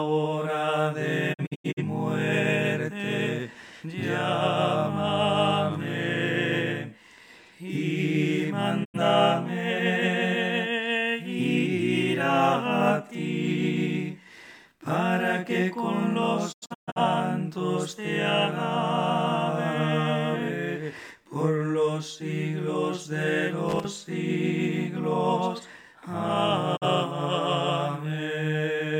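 At 1.32 s a digital broadcast dropout begins. The receiver stopped getting usable frames and muted until valid ones returned. Between 1.32 and 1.82 s the sound drops out in several holes that add up to about 213 ms, scattered over 427 ms. The longest hole is 85 ms, and each edge fades over 20 ms instead of cutting hard. On a waveform these show as flat silent stretches with short ramps on each side. On a spectrogram they are blank vertical bands running across every frequency. The hole lengths come in steps of about 43 ms, which points to whole frames of that duration being discarded.

A second dropout at 8.83 to 8.99 s leaves a single 85 ms gap. At 16.51 to 17.01 s there is a longer cluster: about 299 ms missing across 427 ms, with the longest hole lasting 128 ms. The material in those gaps is gone and does not come back.

From 23.69 to 23.85 s, about 160 ms, there is loose connector crackle. 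A poorly seated contact makes and breaks rapidly, chopping the signal into a short, irregular burst of scratchy crackle. On the waveform it appears as a dense cluster of sharp, uneven spikes. On the spectrogram it shows as broadband vertical streaks packed closely together.

A last dropout at 26.75 s removes one 43 ms slice, which shows as a single narrow blank band on the spectrogram.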